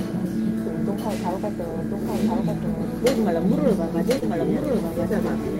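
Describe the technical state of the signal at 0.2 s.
At 0.2 s the sound carries a doubled audio track, present throughout: a dry, full-band copy trails about a second behind, roughly 5 dB quieter, likely from a second, slower capture path.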